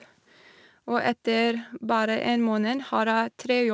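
No technical faults occur at any point in this speech, which has the top end of a wideband call codec, with nothing above 8 kHz.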